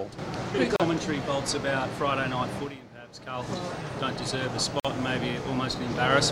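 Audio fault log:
0.76–0.80 s and 4.80–4.85 s: gap at a join of encoded pieces. The sound drops out for about 35 ms, then 49 ms, with smeared edges. Separately encoded chunks, about 4 s apart, kept their encoder start delay and end padding.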